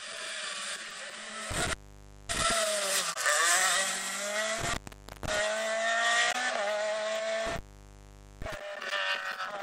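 The audio has two kinds of fault. The first is an intermittent contact, heard three times: 1.51 to 2.51 s, 4.59 to 5.39 s, and 7.46 to 8.54 s. Each time the sound drops out or breaks up, with crackle where the signal breaks and returns. The gaps last 0.56 s, 0.54 s and 0.83 s. Faint hiss remains while the line is open. A loose plug or cable briefly losing its connection causes exactly this. The second fault is damaged data in a compressed stream, at 3.10 to 3.17 s and again at 6.28 to 6.35 s. Each lasts about 70 ms and comes through as a short chirp or blip. Corrupted bytes in the compressed file make the decoder misread those frames. It loses sync and hunts for the next valid frame header. The brief garbled output is what the ear catches.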